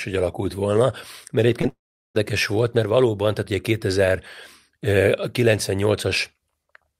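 Short concealed packet loss at 1.61 to 1.65 s: about 20 ms of the speech arrived too late for the decoder, and the receiver bridged the gap by extending the preceding sound for roughly 15 ms before easing back into real audio, leaving a quick smear or wobble.

From 1.69 to 2.17 s the speech cuts out in what is likely a long network dropout: the last sound is carried on as a fading buzz or hiss for a moment, then about 380 ms of silence follows before the speech resumes.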